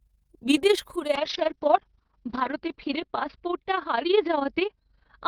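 Overlap-add ripple runs through the whole clip. The frames were rejoined with an overlap that does not sum evenly. The level swings by about 11 dB around thirty times a second. The speech gets a rough, fast flutter.

A call bitrate drop starts at 1.16 s, just after "বিদেশ ঘুরে", and lasts to the end. The bandwidth falls from 20 kHz to 6 kHz. The coding turns coarse, muffled and watery, which fits a fall from 32 to 7 kbps. The worst stretch lasts 1.39 s.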